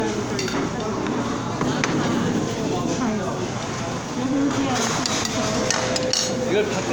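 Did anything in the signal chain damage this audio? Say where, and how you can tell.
Yes, at the codec stage: generation loss throughout. The whole clip has a swirly, hollow smear and blurred attacks, worse than a single pass at around 128 kbit/s would give. It's likely from roughly seven MP3 re-encodes, each requantising on a shifted frame grid.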